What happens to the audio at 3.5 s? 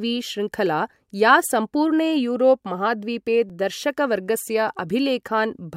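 At 3.50 s there is a block of digital silence about 2.9 ms long, likely because the program failed to fill its output buffer in time, which fits a 128-sample buffer. The speech drops abruptly out and returns without any fade, so the gap is heard as a tick or dip.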